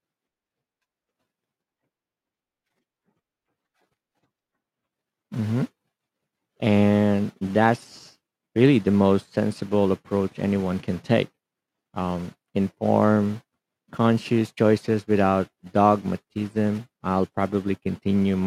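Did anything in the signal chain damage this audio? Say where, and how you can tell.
No, nothing in this recording stood out on listening as damage from any stage of the signal chain.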